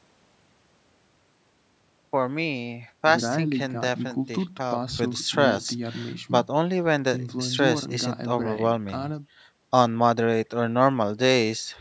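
No technical faults occur at any point in the speech, which has gone through normal call microphone processing that leaves nothing above 8 kHz.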